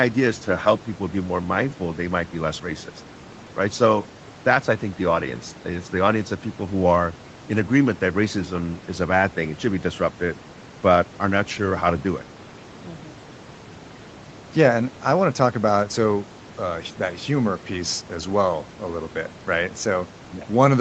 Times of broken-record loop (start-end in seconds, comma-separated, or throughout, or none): none